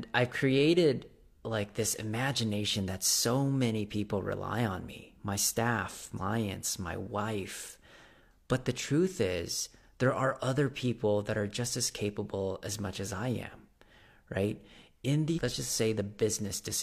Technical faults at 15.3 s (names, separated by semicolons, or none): compressed frames skipped